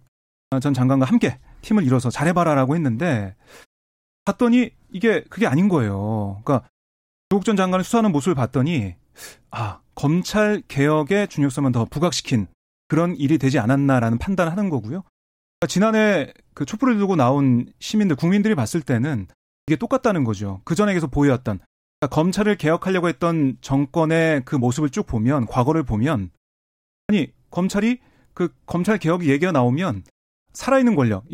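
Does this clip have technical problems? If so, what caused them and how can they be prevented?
Yes. There's a clipped start after a pause at 0.48, 4.23, 7.27, 12.86, 15.58, 19.64, 21.98 and 27.05 s. Each time, about 40 ms of onset is swallowed after a gap of 0.38 to 0.76 s, because the output device sleeps in silence and wakes late. To prevent it, keep the output path awake during silence by disabling its power-saving idle mode.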